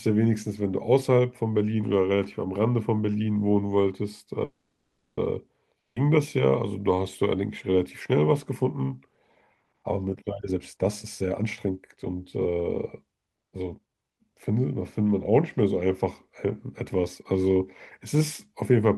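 At 4.44 s, packets were likely held up in transit and the jitter buffer ran dry, causing a call audio freeze. The receiver stretched the last sound into a fading buzz for 0.73 s, ending in about 60 ms of silence, then resumed where it stopped. Nothing is lost, but everything after arrives 730 ms later.

At 5.80 s comes a long network dropout, likely from packets that never arrived. About 160 ms of audio is gone: a brief fading continuation of the last sound, roughly 70 ms of silence, then the audio resumes at 5.97 s with that stretch simply missing.

From 10.39 s to 14.52 s, a jitter buffer speed-up occurs. The buffer held more audio than its target, so the receiver trimmed many short pitch-period slices to catch up. The speech runs at 118% speed at unchanged pitch and sounds hurried, shedding around 0.7 s in total.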